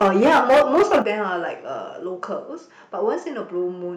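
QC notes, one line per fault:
0.01–1.1 s, microphone overload: the input gain was likely set far too high, driving peaks about 12 dB past the converter's limit and flattening the tops of roughly one sample in seven. This gives the loudest syllables a harsh, crackling edge across this stretch.
0.03 s and 1.02 s, microphone volume stepped down: the call software likely reacted to the overloaded input by cutting the device's volume in single jumps, first about 3 dB, then about 10 dB. The speech and its background drop abruptly in level at each point, with the larger cut arriving just before the overload ends.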